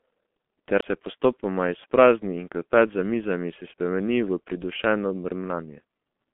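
From the start, the G.723.1 codec shapes the whole clip. Nothing above 3.6 kHz survives, so a spectrogram shows a hard ceiling there. The slowly updated voice model and heavy codec damage blur consonants and make the speech hoarse and muffled, which fits a stream of about 6 kbit/s.

At 0.81 s a CD skip occurs just before "se postopoma". The player drops out for a very brief instant, heard as a tick or short gap, and then resumes from a different place on the disc's spiral. The waveform shows a short flat gap and a discontinuous jump.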